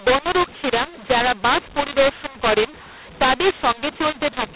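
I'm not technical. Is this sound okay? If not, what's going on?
No. From the very start to the end, the speech sounds harsh and gritty, as if pushed through a broken loudspeaker, and the pauses between phrases fill with a hiss instead of going quiet. This is a mu-law and A-law mix-up. The recording was stored in the telephone format's A-law version but played back as if it were mu-law. The two versions map loudness differently, so every level comes out wrong, and even silence is lifted into audible noise.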